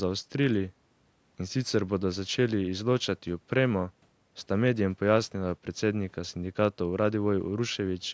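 No technical faults can be heard in this speech: it carries the ordinary marks of call microphone processing, with the lowest bass trimmed away and nothing present above 8 kHz.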